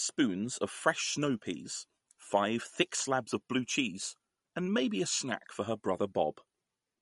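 Throughout the speech, the treble stops dead at 11.2 kHz. The sound is watery and swirly, and s sounds chirp metallically. Weak frequency lines are dropped and flicker between frames. This is likely MP3 compression, at a rate that fits about 48 kbps.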